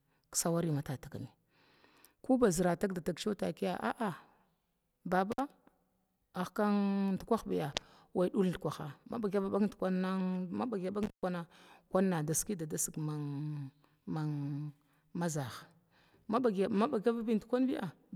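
Intermittent contact at 5.32 to 5.40 s and again at 11.03 to 11.23 s: a loose plug or cable opens briefly, dropping the speech for about 51 ms, then about 127 ms, with crackle at each break and faint hiss while the line is open.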